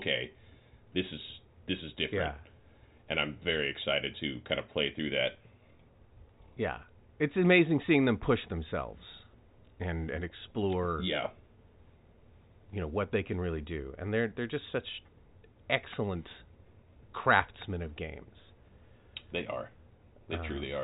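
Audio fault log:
The speech sits in an ordinary G.711 telephone channel, with nothing above about 3.8 kHz and only the faint, level-following hiss that 8-bit logarithmic coding leaves beneath the signal.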